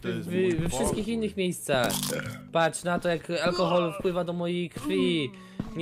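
No technical faults can be heard anywhere in the audio.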